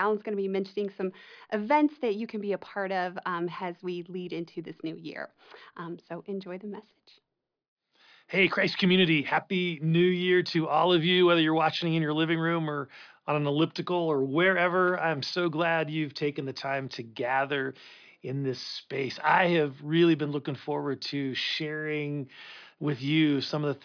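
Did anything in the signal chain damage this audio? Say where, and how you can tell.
No, nothing along the chain seems to have damaged this speech recording, and there's nothing to point to at any stage.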